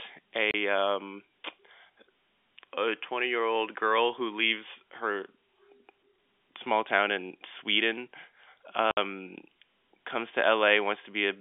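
At 0.51 s the speech drops out for 30 ms, and at 8.91 s for 60 ms. This is packet loss filled with silence: each gap fits one and two lost 30 ms packets. The gaps have hard edges, over narrow telephone-band G.711 audio.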